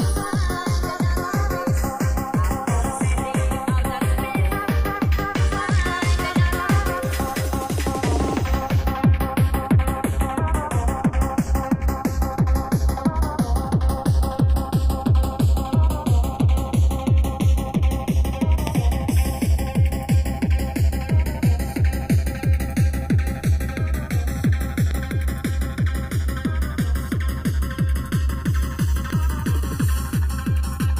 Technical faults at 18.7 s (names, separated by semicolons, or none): channels drifting apart; loud pop